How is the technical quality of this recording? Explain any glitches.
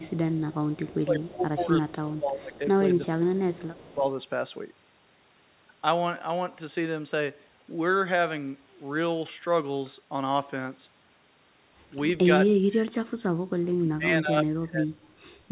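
The recording has two recurring call faults: a faint echo and repeated dips in the speech. It has the narrow telephone sound of G.711 A-law, with nothing above 4 kHz, which fits a 64 kbps stream.

Echo leak: 0.03 to 0.54 s, 0.72 to 0.95 s, and 3.74 to 3.94 s. A faint copy of the speech trails 349 ms behind, roughly 25 to 30 dB down. The likely cause is a far-end echo canceller leaving residue.

Speech suppressed in double talk: 0.06 to 0.21 s, 1.02 to 2.61 s, 3.21 to 4.04 s, 12.56 to 13.05 s, and 13.78 to 15.0 s. The speech sinks by roughly 10 to 30 dB and is deepest late in the clip. The likely cause is the echo canceller turning down its own talker along with the loudspeaker echo while both sides talked at once.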